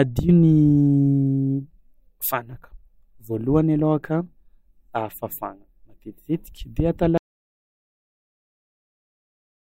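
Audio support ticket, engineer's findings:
Audio dropout to silence from 7.18 s, after "matetitetiky de atao", to end. Silence, no room tone. Likely input lost while the encoder kept writing.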